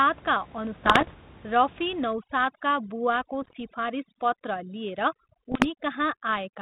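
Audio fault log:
0.84 to 1.12 s, 3.42 to 3.57 s and 5.51 to 5.67 s: bit errors on an ADPCM link. You get pops and gritty little bursts with quick level jumps. Each flipped bit throws off the decoder's step size and prediction, so the damage smears on for a few milliseconds. The later two bursts sound denser.
2.13 s to the end: overdone noise removal. The background drops and breaks up into twinkly specks. The suppressor is cutting whole frequency bands whenever they dip near its noise estimate, and the softer parts of the speech get cut with them.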